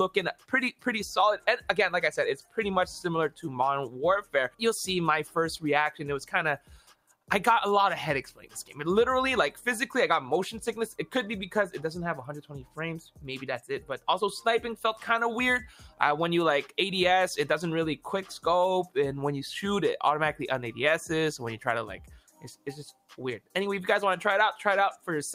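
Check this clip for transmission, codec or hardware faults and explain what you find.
The clip shows no transmission or hardware faults; the problem is a speech-tuned processing stage left running on material it wasn't designed for.

Noise suppressor applied to music or sounds: throughout, a suppressor built for speech treats steady tone and ambience as noise. Its gain keeps moving by something like 5 dB, so held sound and tails pump and thin while attacks pass mostly intact.

Sound cut by the noise suppressor: at 0.34–0.53, 1.38–1.71, 2.4–2.58, 6.58–7.3, 8.31–8.73, 12.42–12.77, 15.85–16.0 and 22.2–22.67 s, the suppressor classes sustained or decaying sound as noise and pulls it down by about 9 to 12 dB, leaving audible dips and clipped decays.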